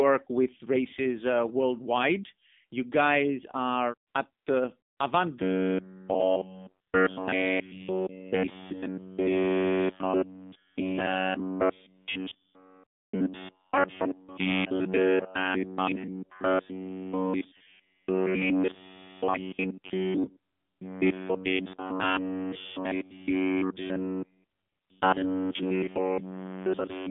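Throughout, the speech has passed through the AMR narrowband mobile codec. The signal is squeezed into a telephone band of roughly 200 Hz to 3.6 kHz, with nothing above 3.7 kHz, and resynthesised from a coarse vocal-tract model at a low bit rate, which fits the 7.4 kbps mode. The damage is plainly audible: the voice sounds boxy and muffled, with a buzzy, synthetic edge to every sound.

From 5.42 s to the end, the playback system likely stops receiving fresh audio often enough and covers the gaps by looping the most recent short buffer while the real signal is thrown away. That produces robotic sound from repeated short buffers. Essentially all of this stretch is repeated material. The loop imposes a fixed buzz at 93.8 Hz, which points to a repeat period of about 10.7 ms. The voice becomes a rigid metallic drone that only loosely traces the speech.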